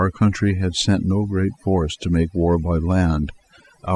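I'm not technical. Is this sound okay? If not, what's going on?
No, not quite. The whole clip has overdone noise removal: the background drops and breaks up into twinkly specks.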